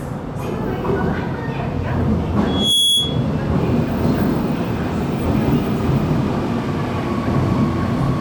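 At 2.28 s the sound jumps abruptly, as if a small sliver were cut out and the two sides butted together with no silence between them. The same skip comes back at 5.26 s, exactly 3.0 s later. This regular spacing is the signature of audio missing between chunks. The likely cause is a recorder or processor working in 3-second blocks and dropping roughly 20 ms at each handover.

Just after the first skip, from 2.46 s to 3.27 s, a piercing whistle at 3.4 kHz rises out of the audio. It swells over about a third of a second and settles at about 5 dB above the rest of the sound before it stops. This is loudspeaker feedback squeal: a microphone was picking up the loudspeaker it was feeding. At that one frequency the loop's gain went above unity, so the tone kept reinforcing itself.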